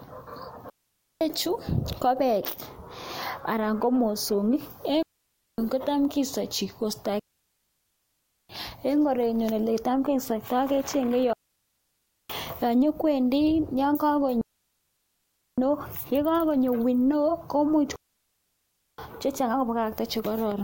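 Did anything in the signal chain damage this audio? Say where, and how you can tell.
Yes. The speech suffers a digital wireless dropout at the radio link: six clean holes of near silence at 0.70, 5.03 (after "anan ko mosongik"), 7.19, 11.33, 14.41 and 17.96 s, lasting 0.5 to 1.3 s, with no noise bursts. The receiver mutes quickly when too much data is lost.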